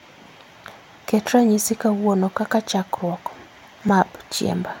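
A single brief tick or dip interrupts this speech clip at 3.89 s. It is a block of digital silence: about 1.45 ms of samples, which fits a 64-sample block, drops straight to silence and back with no fade.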